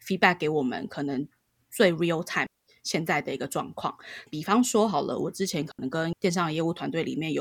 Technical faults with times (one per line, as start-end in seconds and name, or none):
2.46-2.66 digital wireless dropout
5.72-5.79 digital wireless dropout